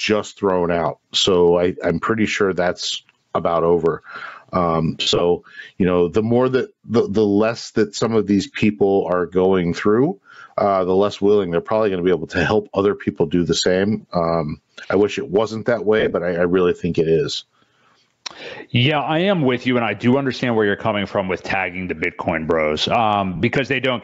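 Throughout the clip the level swings by around 20 dB, leaving the dynamics squashed. This is gain pumping, likely from input gain set far too high with a fast limiter clamping every peak.

At 5.01 to 5.21 s, tonal content smears into a hissy wash in broken patches, about 140 ms lost across 195 ms, the longest stretch near 70 ms. These are lost LE Audio frames: the LC3 decoder repeats the last spectrum with scrambled signs, then fades it. Shorter smears follow at 15.99 to 16.13 s and at 23.36 to 23.40 s, the last about 38 ms, consistent with 7.5 ms frames.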